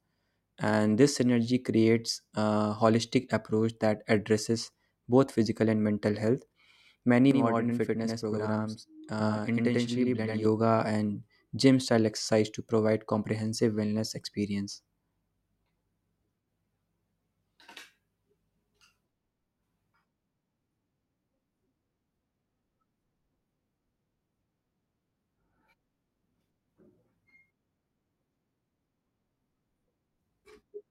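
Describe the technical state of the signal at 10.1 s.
At 10.1 s the speech carries a channel delay, heard as doubling. It runs from 7.31 s to 10.45 s and ends just before "and gym style exercise". One channel arrives about 93 ms late, which fits a 4096-sample buffer. The two channels are then summed to mono. The late copy comes back at equal level as a distinct slap echo, so every syllable sounds doubled.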